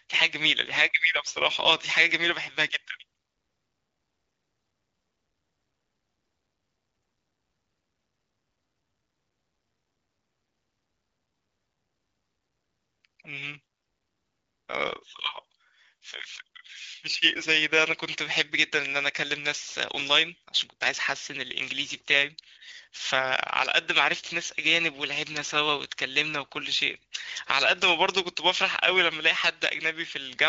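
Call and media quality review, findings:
No faults found in the speech. The AMR wideband (HD Voice) codec path is audible as light coding colour, consistent with around 12.65 kbit/s, with speech band up to about 7 kHz.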